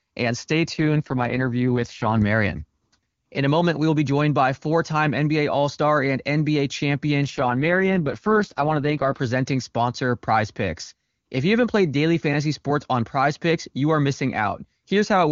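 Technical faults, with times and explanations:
0.73–2.22 s and 7.24–9.20 s, AMR rate drop: speech turns rough and synthetic, as if the AMR-WB codec briefly fell from about 23.85 to 6.6 kbit/s, then recovers. The spectrogram keeps its full band and the waveform shows no gap.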